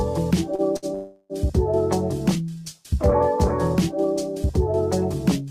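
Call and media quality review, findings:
Short stall from a late packet, 0.55–0.62 s and 0.77–0.86 s. Jitter buffer empty. Last sound held about 31 ms, then 60 ms. Nothing lost; playout shifted later.

Call audio freeze, 0.95–1.33 s. Sound continued as a fading buzz or hiss for 350 ms, never silent. Likely packets held up in transit. Resumes where it stopped; nothing missing.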